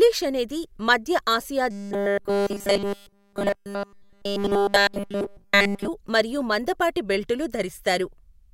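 Robotic sound from repeated short buffers runs from 1.71 to 5.88 s of this speech clip, turning the voice into a rigid metallic buzz at 200 Hz throughout that stretch. It's likely caused by audio arriving too seldom, so a 5 ms buffer keeps being replayed while real audio is skipped.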